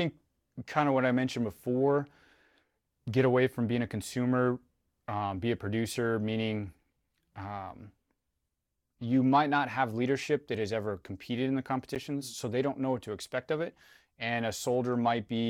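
A sharp tick interrupts this speech clip at 11.95 s, between "ever competed in the" and "so they don't know": a block of digital silence about 10 ms long. The signal cuts out and back, unfaded, which points to an output buffer not being filled in time.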